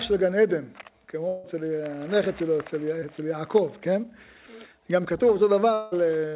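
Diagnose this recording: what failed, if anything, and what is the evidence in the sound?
Long network dropout, 1.28–1.46 s and 5.74–5.93 s: audio likely stopped arriving over the network, and the receiver extended the last sound through each gap without falling silent.

Short concealed packet loss at 3.00 s: 20 ms of network audio missed the decoder, so the receiver continued the preceding sound, leaving a brief smear.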